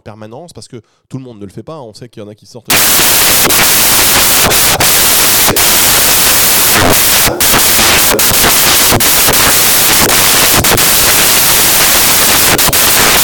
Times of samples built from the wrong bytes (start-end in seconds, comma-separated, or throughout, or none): 2.70-13.23